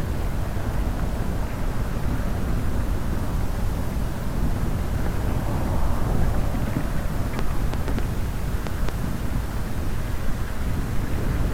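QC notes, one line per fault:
7.39–8.90 s, train of clicks. A run of sharp ticks sits over the sound for about 1.5 s. There are roughly seven of them, at about 3.3 clicks per second. The spacing is uneven. Each click has much the same shape and pops out well above the sound, by around 15 dB at the peak. Something is likely injecting these pulses, such as nearby interfering equipment or a faulty connection or power supply.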